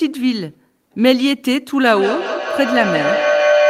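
A speech clip with feedback howl from 1.81 s to the end: a tone around 500 Hz swells until it peaks about 4 dB above the speech, pulsing roughly every fifth of a second. A microphone and loudspeaker on the same call share a room, and each pass round that loop adds level. Unlike ordinary echo, whose repeats fade, these grow and narrow onto one pitch. Unlike mains hum, the tone is absent before 1.81 s and never settles, because nothing breaks the loop.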